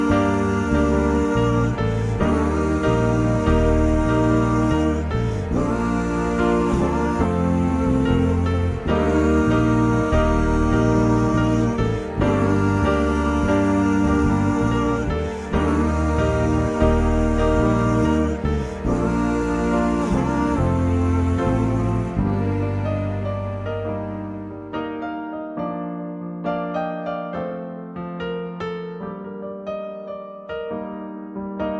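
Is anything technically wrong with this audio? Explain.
No, nothing is technically wrong with this audio.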